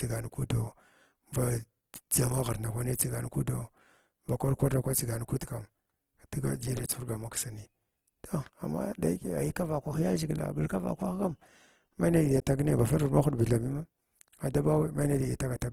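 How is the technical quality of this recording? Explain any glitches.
The technical quality is compromised by audible codec damage throughout the speech. From start to finish, the sound turns rough and grainy. This is likely Opus compression in its music mode, starved of bits, which fits a rate near 16 kbps. It keeps each band's energy but fills detail with folded or noisy content. Bandwidth stays full, reaching about 20.3 kHz, so the damage is grit rather than muffling.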